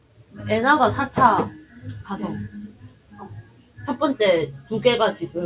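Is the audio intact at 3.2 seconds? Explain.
No. A noise suppressor built for speech is running over the whole clip, even though the audio is sounds rather than speech. It treats steady, sustained content as noise and turns it down, so the level keeps swinging by around 20 dB. Held sound sinks while sudden onsets mostly get through, which leaves the clip pumping and thinning out instead of holding a steady level.

The moment at 3.2 seconds falls inside a stretch from 2.69 to 3.25 s where the noise suppressor cut this sound harder than the rest. It judged this material to be noise and pulled it down by as much as about 12 dB. For roughly half a second the sound sags, then it comes back up just after 3.25 s.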